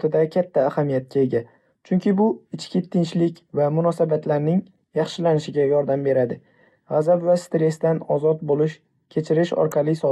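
A short squeaky burst of wrong-pitched noise cuts through the speech from 9.67 to 9.72 s, peaking around -20 dBFS. This is a corrupt frame decoded: bits in a handful of compressed frames were damaged, and the decoder still played them, misplacing energy across frequencies.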